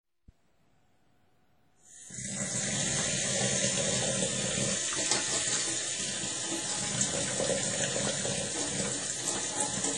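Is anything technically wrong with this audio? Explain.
Yes. Throughout, it's washy and ringing, with hiss breathing alongside the sound and nothing above 11.4 kHz. That's likely heavy WMA compression, fitting a low bitrate around 32 kbps.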